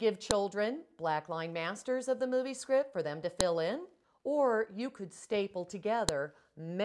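Joined or streamed WAV segments kept their file headers, so the header bytes played as audio, giving sharp, loud clicks at 0.31, 3.41 and 6.09 seconds.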